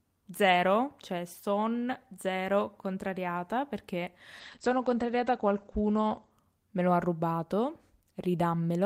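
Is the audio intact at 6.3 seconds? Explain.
No. At 6.3 s the speech sounds muffled and watery, with the highs cut above 8 kHz. This is a call bitrate drop from 4.44 to 6.43 s, between "son zero contrariata perché" and "me lo ha rubato". It fits the encoder falling from about 32 to 13 kbps and coding more coarsely.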